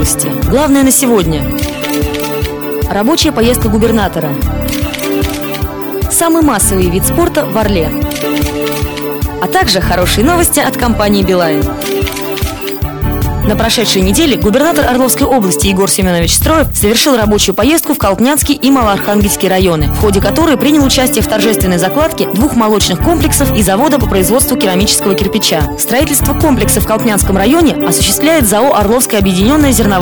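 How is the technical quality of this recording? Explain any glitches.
The recording has one persistent problem: hard clipping runs through the whole clip. The signal is driven about 6 dB beyond what the converter or processing stage can pass, so every peak that exceeds the ceiling is sliced flat, affecting around four percent of samples. Those squared-off tops generate harmonics reaching high up the spectrum, heard as a gritty crackle on loud moments. On a waveform, peaks appear as flat plateaus; a spectrogram shows bright vertical smears of broadband energy at each loud instant.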